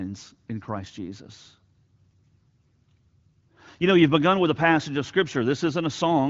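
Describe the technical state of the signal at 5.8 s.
At 5.8 s the speech is intact, with no fault present, just the steady band-limited clarity of AMR wideband (HD Voice) coding.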